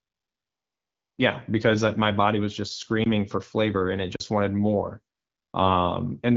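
A speech recording carried over an AMR wideband (HD Voice) link at 12.65 kbit/s shows two kinds of fault. The first is AMR comfort noise. From 0 to 1.17 s, and again from 5.15 to 5.53 s just after "wanted more", the sender treated the signal as silent and stopped sending speech frames. The receiver filled those stretches with synthetic noise built from a rough level and spectral estimate, so the real background gives way to a smooth, steady hiss that switches in and out at the boundaries. The second is a block of digital silence. From 3.04 to 3.06 s, between "my body was just" and "for flavor and it", a 20 ms run of samples drops to zero. A 40 ms hole at 4.16 to 4.2 s follows, between "for flavor and it" and "wanted more". Each cut to and from zero has no fade, and the longer gap reads as a brief dropout. Zeroed blocks like these point to the output buffer not being filled in time.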